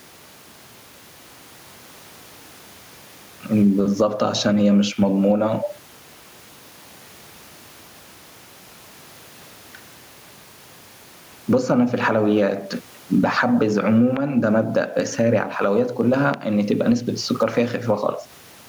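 Gain pumping runs through the whole clip: the level swings by roughly 15 dB as a fast limiter clamps down on each loud syllable, likely because the input gain is set far too high. The room noise sits about 41 dB below the speech, and the speech is left squashed and flat in dynamics.

A loud pop lands at 14.17 to 14.19 s, peaking roughly 20 dB above the speech, and a second at 16.34 to 16.36 s, about 15 dB above. Each is a single sharp click over the continuing speech, likely a voltage spike from a plug, switch or static discharge.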